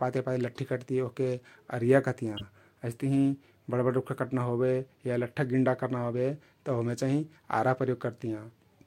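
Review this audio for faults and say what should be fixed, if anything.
A corrupt frame decoded at 2.37 to 2.43 s causes a brief chirp, squeak or burst of noise in the speech. Flipped bits across a few frames misplace energy, peaking around -25 dBFS. Use error detection with concealment so damaged frames are masked, not played.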